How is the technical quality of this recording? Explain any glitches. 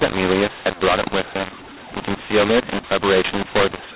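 The recording is marred throughout by a mu-law and A-law mix-up: telephone speech coded with mu-law is decoded as A-law, scrambling sample levels into harsh distortion. Unlike the faint level-following hiss of normal 4 kHz telephone coding, this fills pauses with noise.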